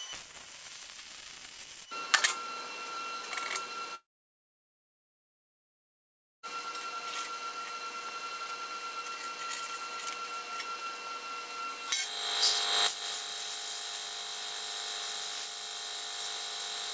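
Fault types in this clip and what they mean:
long network dropout: at 3.95 s a brief fading buzz gives way to 2.4 s of silence, and sound resumes at 6.46 s, likely after network loss.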